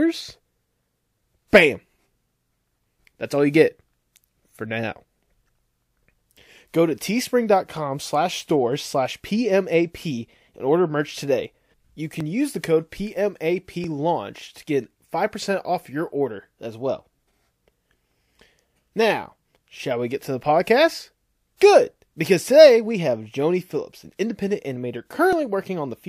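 From 0.70 s to 25.33 s the speech carries a short click roughly every 1.64 s, about fifteen in all, evenly spaced regardless of what is being said. That steady spacing points to clock drift buffer slips, likely from two devices running on separate clocks about 700 ppm apart. The buffer between them drifts until a block of around 70 samples is dropped or repeated, and each slip lands as a tick in the waveform.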